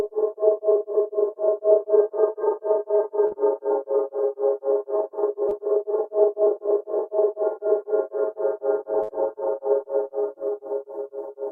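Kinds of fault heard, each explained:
Short concealed packet loss: the receiver patched two dropouts, about 40 ms at 3.27 s and 20 ms at 5.49 s, by extending prior sound, showing as brief smeared spectrogram patches.
Burst of packet loss: about 50 ms vanished at 9.03 s. The last sound is stretched and fades, a decaying waveform envelope, before audio resumes further on.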